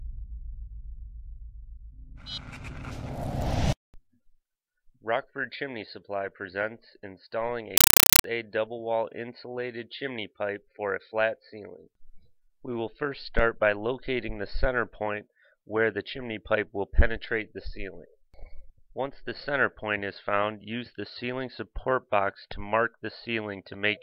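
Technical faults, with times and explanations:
7.77–8.24 s, compressed stream played as audio. Loud chattering static replaces the sound. Undecoded 5.33 ms data bursts repeat 31.25 times a second, fitting AC-3.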